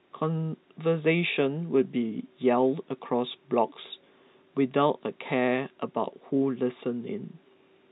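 No technical faults turn up anywhere in the speech. It carries the narrow band of G.711 telephone coding, with nothing above 4 kHz and only a faint quantisation hiss that rises and falls with the level.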